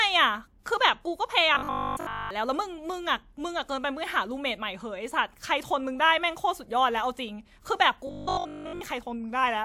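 From 1.55 to 2.31 s, and again from 8.07 to 8.81 s, the speech collapses into robotic sound from repeated short buffers: a rigid 50 Hz metallic buzz, likely from a roughly 20 ms chunk looping while nearly all the real audio gets skipped.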